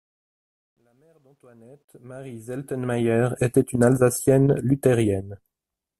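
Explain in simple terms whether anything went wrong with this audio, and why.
Something did go wrong, right at the start: truncation distortion on the fade-in. From 0 to 3.36 s the speech comes up gritty, worst before 1.69 s, because the fade drops fine detail without dither, which fits a 12-bit stage. It clears just before "était une".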